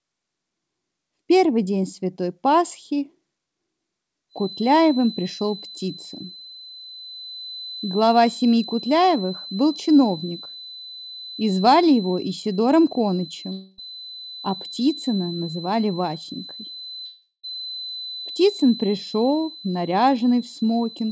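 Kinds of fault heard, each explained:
Feedback whistle: A loudspeaker-to-microphone loop likely sat just at the edge of feedback, so a single 4 kHz tone keeps ringing without building up. From 4.28 s to the end it is a thin, steady whistle roughly 15 dB under the sound, swelling and fading slowly.
Long network dropout: Audio likely stopped arriving for 260 ms and then 380 ms, so the receiver stretched the last sound over each gap. At 13.52 s and 17.06 s it trails on as a fading buzz, the second briefly falling silent, then audio resumes without the lost part.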